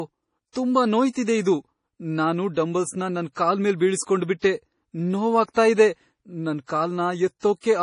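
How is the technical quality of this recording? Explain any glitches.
The technical quality is poor, with heavy codec damage throughout.

MP3 compression affects the whole clip. Nothing is heard above about 10.5 kHz. The speech sounds watery and swirly, as weak frequency lines switch on and off between frames. The damage likely comes from low-bitrate MP3 encoding, which fits around 32 kbps.

Pre-echo appears from 5.53 to 5.56 s, spreading over 35 ms. A sharp attack falls late in a transform block. The coding noise is spread across the whole block, so a brief hiss comes before the attack, which sounds smeared.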